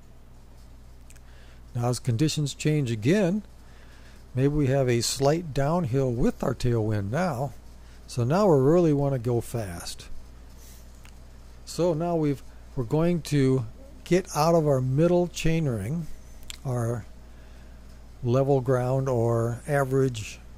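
Nothing in this one trips the ear; you can just sit back and listen without anything technical getting in the way.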